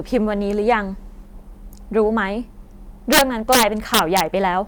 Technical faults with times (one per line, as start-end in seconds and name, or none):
3.13-4.21 integer overflow